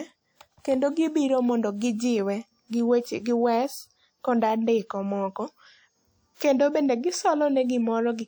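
At about 6.35 s, just before "kendo bende", a short hiss rises out of the quiet for roughly 58 ms, ending at 6.40 s, and the onset that follows arrives softened and smeared instead of crisp. This is pre-echo. A transform codec spreads its quantisation noise evenly across a whole block, so the noise sized for that sharp speech attack also fills the near-silent stretch ahead of it, where nothing masks it.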